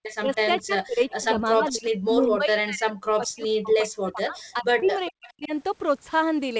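Speech with faint delayed copies of the sound trailing about 0.4 s behind at 0.03–0.62 s, 3.42–3.48 s, 4.39–4.43 s and 5.06–5.49 s, about 15 to 35 dB down. This is likely echo leak from a loudspeaker the canceller didn't fully clear. On a spectrogram it shows as ghost harmonics offset in time. Between 0.16 and 5.52 s the speech repeatedly dips and cuts out, by as much as roughly 40 dB and across some four seconds in total. This points to speech suppressed in double talk, visible as the waveform collapsing into gaps and notches. At 4.80–4.84 s a 20 ms hole is bridged by short concealed packet loss, heard as a brief smear and seen as a slightly blurred, repeated spectral slice. Above all of this, the spectrogram shows a flat ceiling at 8 kHz from the call's wideband path.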